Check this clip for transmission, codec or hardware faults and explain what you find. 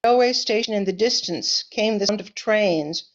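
Two brief faults of the same kind are present. Damaged data in a compressed stream, at 0.04 s and 2.09 s: corrupted bytes make the decoder misread those frames and lose sync until it finds the next valid frame header, producing a short chirp or blip in the speech.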